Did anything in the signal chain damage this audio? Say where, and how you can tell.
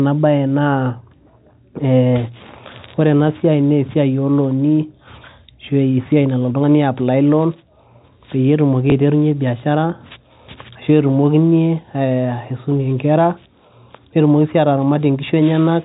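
Yes, at the network stage. From 8.90 to 8.92 s the speech briefly blips: a 20 ms stretch is replaced by a copy of the audio just before it, which fits a single lost 20 ms packet. This is packet loss with the last packet repeated. The receiver filled the gap by replaying the previous packet, and the repeat comes through as a small blip.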